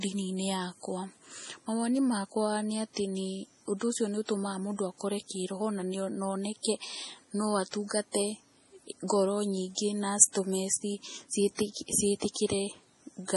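Throughout, heavy watery swirling and smeared attacks point to likely MP3 compression near 32 kbps; a spectrogram shows flickering gaps and nothing above 11.5 kHz.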